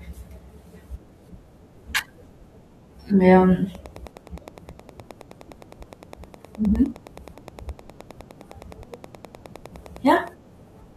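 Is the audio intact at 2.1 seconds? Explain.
Yes, the audio at 2.1 seconds is intact, with no dropout, click, distortion or other fault at that moment.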